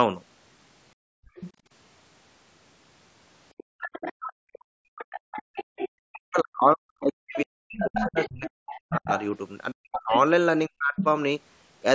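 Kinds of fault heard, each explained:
Background gated by the echo canceller: While the far end played through the loudspeaker, the canceller clamped the microphone, so the room tone sinks, by about 35 dB between 0.95 and 1.65 s and about 36 dB between 3.64 and 5.76 s, covering roughly half a second and a second in total. On a waveform the noise floor flattens almost to a line, and a spectrogram shows the broadband background turning dark, then returning.
Other side's voice leaking through: A second voice sits under the speech at 1.35 to 1.52 s, 3.57 to 5.89 s and 7.03 to 11.06 s, likely loudspeaker sound the canceller failed to remove from the microphone. It starts faint, around 20 dB and then 15 dB below the talker, but grows to only about 5 dB below. A spectrogram shows a second set of harmonic striations overlapping or filling the gaps.
Speech suppressed in double talk: From 6.1 to 10.95 s the talker's own voice keeps dipping and breaking into pieces, sometimes falling by around 40 dB, for roughly three seconds in total, while the other side talks over it, likely the canceller unable to separate the two and turning everything down. 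The waveform shows the speech envelope chopped into sudden holes, and the spectrogram shows harmonics vanishing in vertical bands.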